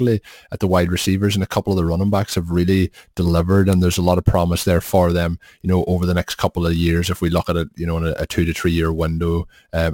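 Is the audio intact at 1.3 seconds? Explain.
No. At 1.3 seconds, as throughout the whole clip, the speech carries sample clock jitter. The converter's clock wanders by around 10 microseconds, so each sample lands a little early or late, and the error scales with how steeply the waveform is changing. That yields a grainy hiss riding roughly 25 dB below the speech, strongest on loud and sibilant sounds. Unlike a steady noise floor, it disappears completely in the pauses.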